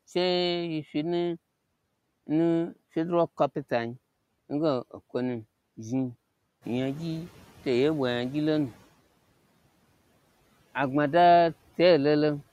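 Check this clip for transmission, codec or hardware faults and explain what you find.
One processing fault is present, a noise suppressor catching up. From 6.61 s to 8.76 s, after the room noise jumps by about 10 dB around 6.5 s, the suppressor's noise estimate trails the new level for 2.15 s. The noise passes through with less reduction at first, then sinks by about 8 dB as the estimate settles.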